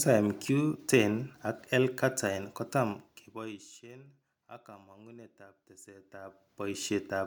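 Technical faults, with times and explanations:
No technical faults can be heard in this speech recording.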